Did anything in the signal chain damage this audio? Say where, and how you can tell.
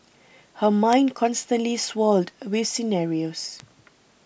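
Yes, word clock ticks at the digital link into the converter. About three sharp clicks fall between 0.93 and 3.6 s, roughly every second and a half. The receiver wasn't locked to the sender's clock, which was off by something like 50 ppm, so each slip drops or repeats a single sample.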